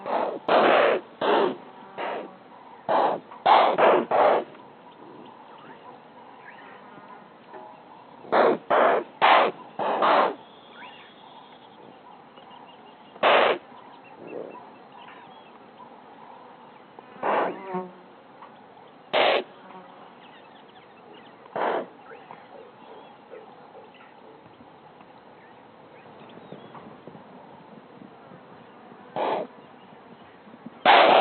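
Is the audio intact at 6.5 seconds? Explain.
Yes, the audio at 6.5 seconds plays through intact, with no dropout, click, distortion or other fault at that point.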